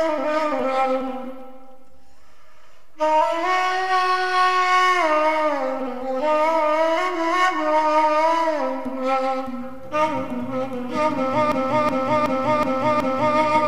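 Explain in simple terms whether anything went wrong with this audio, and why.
Near the end, from 11.52 to 13.38 s, a system hang loop occurs. The computer briefly froze while the sound hardware replayed the same 0.37 s chunk five times, about 2.7 times per second, producing a skipping-record sound. The chunk length fits a 16384-sample buffer.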